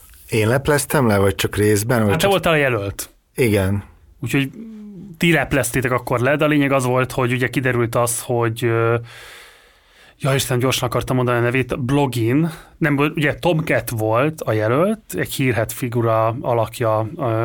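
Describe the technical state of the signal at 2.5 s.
At 2.5 s the speech signal is intact, with no audible fault at that moment.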